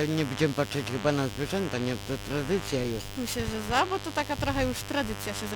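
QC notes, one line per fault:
Throughout: mains buzz. A steady, raspy buzz built on 50 Hz runs under the whole clip, sitting roughly 10 dB below the wanted sound, which makes it prominent rather than a faint hum. The rasp comes from sharp switching spikes, the kind a dimmer, rectifier or poorly shielded cable lets in twice per mains cycle. Those spikes carry a long ladder of 50 Hz harmonics reaching into the kilohertz range, so the noise sounds gritty and wide rather than like a pure low tone.
Throughout: periodic clock jitter. A rough, metallic edge clings to the audio for its full length. It behaves like the converter's sample clock being wobbled at a single rate of around 2 kHz. That regular timing error frequency-modulates everything being converted, placing copies of each component about 2 kHz above and below it. The effect grows with frequency, so brighter content picks up the harshest edge. 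Because the sidebands come from the sound itself, the roughness rides on the audio rather than forming a separate noise.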